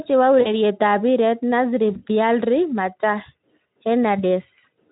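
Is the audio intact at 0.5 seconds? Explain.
No. From 0.41 to 0.52 s, just before "ap piret", VoIP packet loss concealed by the speech codec replaces about 40 ms with a fading extrapolation, a buzzy tone or coloured noise, that recovers slowly.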